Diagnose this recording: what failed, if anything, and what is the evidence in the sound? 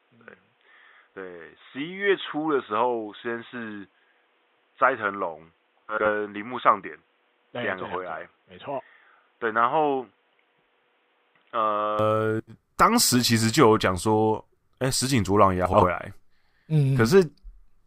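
From the start to 11.99 s the speech is band-limited, with nothing above 3.8 kHz. It sits roughly 5 dB quieter and carries its own noise floor, about 40 dB below the signal. At 11.99 s it opens up, with no gap. The stage is device selection at the driver. The likely cause is an input switched to a poorer device, such as a headset's call profile, before returning to the main microphone.

Frames out of order occur at 5.89 s, 12.39 s and 15.65 s. Each is a garbled flutter about 0.2 s long. Two adjacent runs of about 80 ms, which fits four frames each, arrived swapped and were decoded that way. The stage is network delivery into the decoder. No time is lost.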